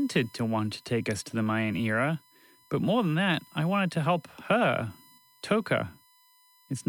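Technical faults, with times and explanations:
Throughout, USB whine: current drawn by the USB bus in 1 ms frames leaks into the audio through shared power or ground, so a steady, fixed-pitch tone at 1 kHz sits under the speech, roughly 35 dB below it.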